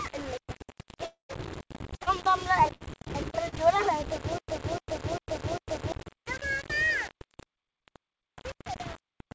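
The whole clip was likely quantized to about 5 bits by rounding, with no dither. The coarse steps leave error noise about 15 dB below the sound and tracking it, so everything has a grainy, gritty edge, harshest on quieter passages. The call path's G.722 coding is also audible, with nothing above 8 kHz.

From 1.06 to 1.31 s comes a long network dropout, most likely a stall in the incoming stream. About 0.24 s of audio never arrives. The receiver stretches the last sound into a fading buzz, then leaves a stretch of near silence before the audio resumes without the lost portion.

Between 4.38 and 5.92 s, a likely player or stream stall causes stutter with silent gaps. At each retry the same 0.30 s fragment replays, followed by 0.10 s of digital silence. It repeats four times at a steady 0.40 s rhythm, and the audio belonging there is lost.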